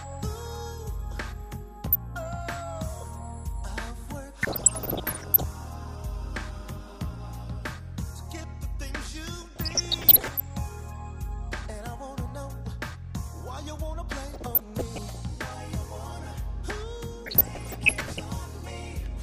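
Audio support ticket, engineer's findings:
Short noise blips over programme: 1.86–1.95 s, 4.43–5.43 s, 9.42–10.41 s, 14.31–15.20 s, 17.26–18.25 s. DAB burbling. Weak reception; bit errors, up to about one percent, escaping error correction into MP2 data, corrupting samples so single sub-bands carry short noise blips.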